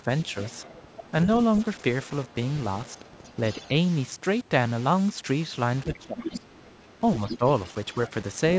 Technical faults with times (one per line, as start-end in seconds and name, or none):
0.00-8.59 low bit depth without dither
0.45-1.11 other side's voice leaking through
1.75-2.36 other side's voice leaking through
2.87-3.69 other side's voice leaking through
5.83-8.11 other side's voice leaking through
5.98-6.46 speech suppressed in double talk
7.38-7.44 speech suppressed in double talk